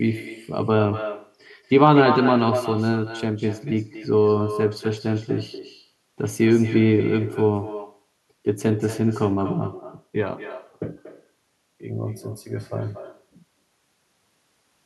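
Throughout, echo with no canceller returns the speech a fifth of a second later, about 12 dB quieter. A far-end loudspeaker feeds its microphone, leaving a thin shadow.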